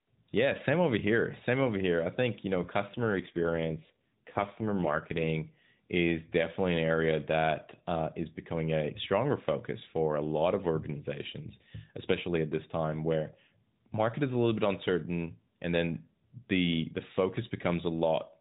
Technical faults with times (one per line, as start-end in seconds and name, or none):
2.96-5.28 AMR rate drop